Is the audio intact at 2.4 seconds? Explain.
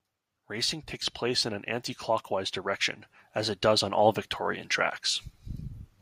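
No. At 2.4 seconds the automatic gain rising is still underway. Between 0.34 and 2.62 seconds the gain control judges the input too quiet and gradually raises its gain by about 6 dB, so the speech and the background noise swell together rather than holding a steady level.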